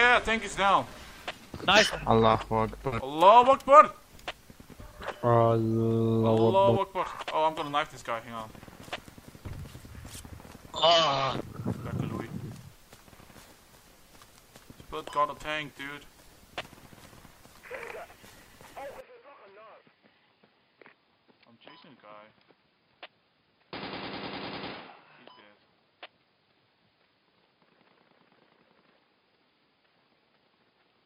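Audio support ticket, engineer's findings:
From 19.0 s to end: abrupt dulling, boxier tone, level down around 10 dB, no gap at the transition. Likely cause: input switched to a poorer device, probably a fallback mic or headset call profile. Its narrower passband cuts everything above 5 kHz. New background noise sits well below the signal, roughly 50 dB down. Spectrogram shows a hard ceiling at 5 kHz from 19.0 s onward. Waveform shows a step down in amplitude at the same point.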